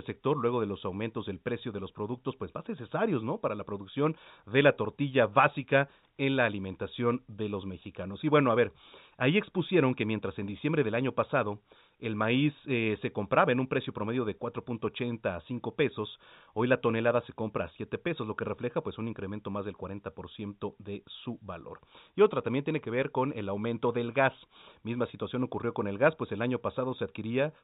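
Nothing goes wrong anywhere in this speech, which comes over an ordinary A-law telephone line with the usual narrow band that tops out around 4 kHz.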